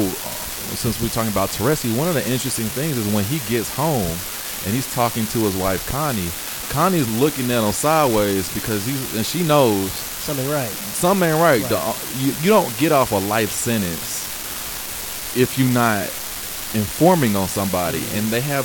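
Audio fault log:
Throughout, unreliable data bit: there's a steady crackly fizz riding along with the speech and carrying right on through the pauses. One data line is flaky, so its bit flips at random, and every flip lands as a same-sized spike of about -15 dBFS.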